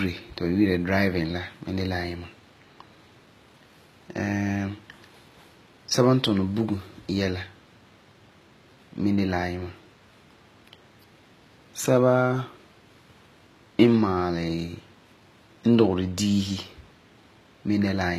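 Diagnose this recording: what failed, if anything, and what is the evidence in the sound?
The speech sounds gritty and lispy on its s sounds from start to finish, and nothing is present above about 14.9 kHz. This points to the codec stage, likely HE-AAC compression at a low bitrate near 20 kbps, where spectral band replication rebuilds the treble from copied lower bands.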